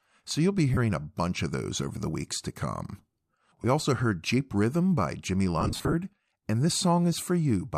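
Speech with lost LE Audio frames at 0.74 s (30 ms, which fits three 10 ms frames), 3.62 s (20 ms) and 5.61 to 5.94 s, where about 200 ms of gaps are scattered with the longest near 40 ms. Unlike hard dropouts, the holes are filled with a noisy smear rather than silence, as the decoder repeats the last spectrum with randomised signs. Faint grain from the likely LC3 coding is audible.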